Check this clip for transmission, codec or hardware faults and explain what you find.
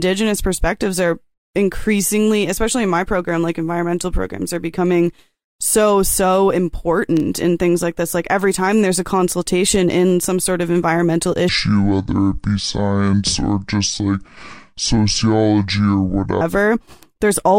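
There is one fault: a section at the wrong speed. From 11.49 s to 16.41 s, just after "some sort of environmental", that stretch of speech plays at 0.59 times its recorded rate. This is likely a playback or editing stage running that segment against the wrong clock. Slowed that far, the voice drops by roughly ten semitones and drags heavily, sounding deep and sluggish, then snaps back to normal speed and pitch at 16.41 s.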